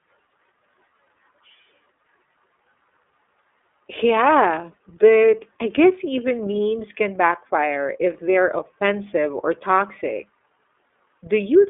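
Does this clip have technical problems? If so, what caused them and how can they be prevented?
Yes. Throughout the speech the sound is thin and boxed in, with nothing above about 3.7 kHz, and a plainly audible rough, synthetic grain. This is iLBC codec damage: each 30 ms frame's excitation is coded independently over a narrowband telephone-style channel, which fits iLBC's 13.33 kbps mode. To prevent it, carry the call over a wideband codec such as Opus at a comfortable bitrate.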